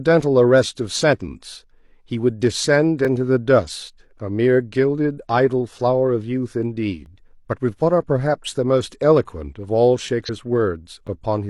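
At 3.05 s the speech clicks and stutters briefly. This is overlapping chunks. The audio was handled in 4-second blocks, and each new block began 12 ms before the previous one ended. That 12 ms of speech plays twice at the join. The same short stutter returns at 7.06 s, exactly four seconds later, and that steady spacing is the giveaway.

From 10.24 to 10.30 s comes a different fault: compressed frames skipped. Several whole frames of the encoded stream never reached the output. The speech jumps ahead by about a fifth of a second, which fits frames of roughly 46 ms.

At 11.07 s the 12 ms overlapping-chunks stutter comes back, again four seconds after the last one.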